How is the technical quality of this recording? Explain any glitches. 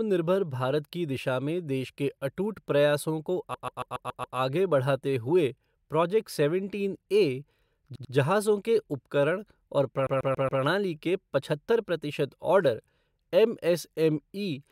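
The speech stutters three times from repeated frames. From 3.53 to 4.37 s a 139 ms block plays six extra times. From 7.94 to 8.13 s a 93 ms block repeats twice. From 10.06 to 10.61 s a 139 ms block repeats four more times. Unlike a dropout, nothing is lost: the same sound is heard again, and the audio runs longer by the repeated time.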